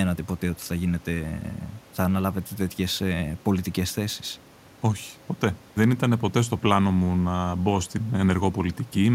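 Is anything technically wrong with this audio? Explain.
No, nothing technically wrong can be heard here.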